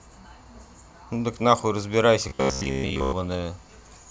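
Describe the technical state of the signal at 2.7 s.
At 2.7 s the speech has robotic sound from repeated short buffers, 2.29 to 3.12 s: a fixed 66.9 Hz metallic buzz, likely from roughly 15 ms buffers replayed in place of most real audio.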